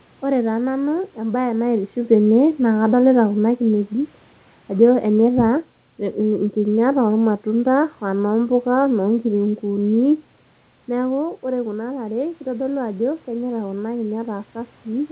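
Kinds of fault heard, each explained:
Automatic gain rising: voice and room noise swell together by about 4 dB over 11.18 to 14.54 s, as the gain control slowly answers an input about 9 dB quieter.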